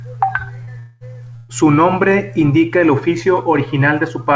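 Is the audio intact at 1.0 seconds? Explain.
No, a long network dropout, likely the cause, runs from 0.79 to 1.04 s: about 210 ms of speech never arrived, and the receiver filled it with a fading buzz or hiss continuing the last sound.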